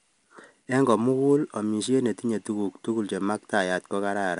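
Throughout, 4-bit ADPCM compression's coarse steps leave gritty hiss swelling with loud speech; the spectrogram shows level-following noise and nothing above 10.6 kHz.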